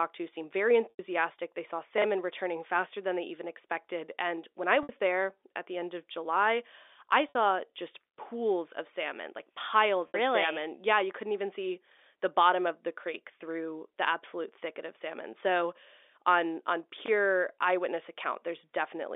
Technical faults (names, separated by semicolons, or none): packet loss with pitch repetition; chunks out of order